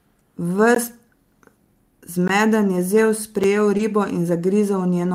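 At 0.75 s and 2.28 s there's a block of digital silence, 16 ms each, where the output buffer likely wasn't filled in time, so the sound cuts out and back with no fade. A shorter one at 3.44 s, about 5 ms and consistent with a 256-sample block, comes through as a tick or dip. Then from 3.77 to 3.81 s there's a short concealed packet loss: 20 ms of audio never arrived, so the receiver stretched the preceding sound to cover the hole, leaving a brief smear. Overlapping its tail, from 3.79 to 3.81 s, a lost packet was rebuilt from error correction. The decoder played the next packet's low-bitrate copy of it, so there's no gap, but that 20 ms sounds rougher and noisier.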